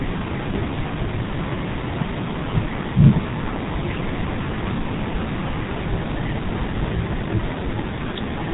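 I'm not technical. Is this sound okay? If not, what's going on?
No. The speech has been squeezed through the G.723.1 codec, an early internet-phone format, from start to end. It discards everything above 4 kHz and refreshes its model of the voice only every 30 ms. So it sounds hoarse as well as muffled, with smeared consonants, unlike a simply dull recording.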